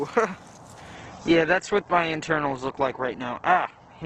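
At 0.96 s the quality drops suddenly and stays low to the end. This is an adaptive stream switching to a lower bitrate. The connection slowed, so the player moved to a cheaper version of the same stream. There is no gap at the switch. Codec artefacts rise from that point. The treble is cut, with nothing above 8.2 kHz. The change sounds like a fall from about 64 kbit/s Opus to about 12 kbit/s.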